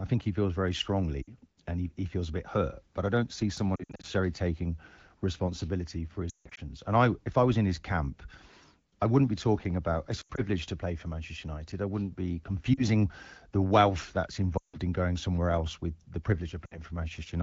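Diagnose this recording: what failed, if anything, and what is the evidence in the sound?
Radio-side failure: lost AMR speech frames at 1.21, 3.76, 6.29, 10.22, 12.73, 14.58 and 16.65 s. The decoder repeats its last good frame at falling gain, so brief hits warble. The 160 ms runs near 6.29 and 14.58 s drop to near silence within two frames before speech returns rough.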